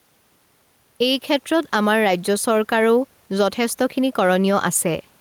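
Gain pumping runs through the whole speech clip: the room noise sits about 41 dB below the speech, and the gain swings by roughly 5 dB, pulled down under every loud syllable. The likely cause is gain set far too high, with a fast limiter pulling it back. Unlike a noise gate, the background never cuts out.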